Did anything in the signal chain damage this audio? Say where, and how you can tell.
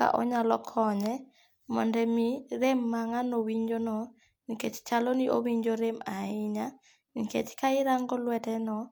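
Yes. At 2.64 s the speech carries a single sharp click, which points to dropped samples, most likely in the driver or buffer stage. A fraction of a millisecond of the stream is missing, so the waveform leaps straight to a later value and the step shows as one thin vertical line across the spectrum. Unlike a dropout or packet loss, no sound is audibly removed and there is no gap or repeat, only the isolated click.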